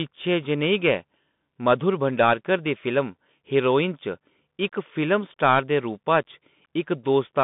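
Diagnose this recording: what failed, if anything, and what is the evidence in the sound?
Scratchy sibilants and a granular hiss run under the speech throughout, with nothing above 3.8 kHz and the line band held to about 150 Hz to 3.6 kHz. This is codec-stage damage from a Bluetooth CVSD headset codec, consistent with 64 kbps one-bit delta coding whose adaptive step can't track loud high content.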